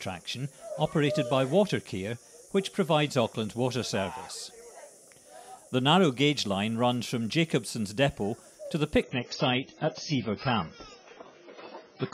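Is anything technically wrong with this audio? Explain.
Yes. Adaptive stream at a lower bitrate, from 9.03 s to the end: the stream switches to a much lower-bitrate version, consistent with a drop from roughly 96 to 16 kbit/s AAC. Treble vanishes above 7 kHz and codec artefacts rise suddenly, without any gap.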